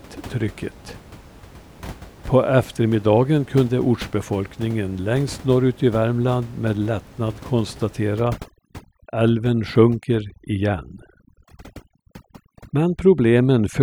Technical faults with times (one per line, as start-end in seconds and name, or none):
8.17-13.82 overdone noise removal